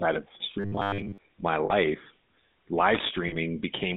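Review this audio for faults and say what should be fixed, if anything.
GSM full-rate codec coding runs through the whole speech clip. The band sits between about 200 Hz and 3.7 kHz, and the regular-pulse excitation gives a plainly audible buzzy, gravelly roughness, consistent with the 13 kbit/s full-rate codec. On a spectrogram, everything above 3.7 kHz is empty and the harmonics look smeared and grainy. To prevent it, carry the call over a wideband or modern codec path instead of GSM full rate.

A robotic sound from repeated short buffers appears from 0.60 to 1.18 s. The speech hardens into a rigid, metallic 100 Hz buzz that still roughly tracks the syllables. The likely cause is audio arriving too seldom, with the last 10 ms chunk replayed while most of the real signal is skipped. A spectrogram shows evenly spaced horizontal lines at multiples of 100 Hz, and the waveform roughly repeats every 10 ms. 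To prevent it, enlarge the jitter buffer or fix the scheduling that starves the audio stream.

Lost GSM frames occur at 1.66–1.73 s and 3.28–3.36 s. Each gap of about 40 ms, which fits two 20 ms frames, is filled by repeating the last good frame's parameters. This produces a short, rough metallic ring. The spectrogram shows a frozen spectral pattern, and the waveform shows a stretch that does not follow the surrounding speech. To prevent it, improve radio coverage or the channel error protection.

Loose connector crackle sounds from 2.95 to 3.11 s as an irregular burst of scratching. A worn or dirty contact is making and breaking, chopping the signal. The waveform shows jagged spikes and dropouts, and the spectrogram shows scattered vertical broadband streaks. To prevent it, clean or replace the connector and secure the cable against movement.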